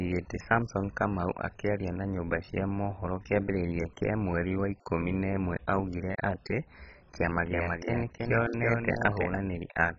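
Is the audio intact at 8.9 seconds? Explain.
No. From 7.14 to 9.38 s, just after "na ĩmwe augire atĩ", a doubled audio track plays: a full-band copy trails about a third of a second behind, a few dB quieter, likely from a second out-of-step capture path. The waveform shows repeated envelopes offset by that gap.

MP2 compression is also audible, with dull, gurgling, granular sound and nothing above 7.5 kHz. Upper sub-bands switch off, which points to likely starvation at around 16 kbps. A spectrogram shows a hard ceiling and flickering blocks.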